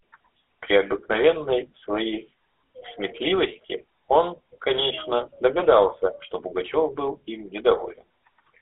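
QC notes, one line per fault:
Throughout: GSM full-rate codec. The sound is held to a line band of roughly 300 Hz to 3.5 kHz, with a plainly audible buzzy, gravelly roughness. The coder models the vocal tract and drives it with regularly spaced pulses built from only a subset of excitation samples, which fits a 13 kbps full-rate stream. On a spectrogram, energy stops abruptly at 3.5 kHz and thins below 300 Hz, with smeared, grainy harmonics in between.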